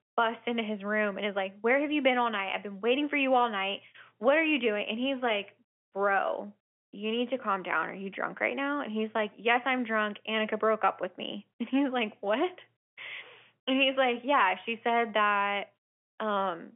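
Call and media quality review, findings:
Nothing stood out on listening to this speech, which carries the expected narrow telephone band with nothing heard above roughly 3.7 kHz.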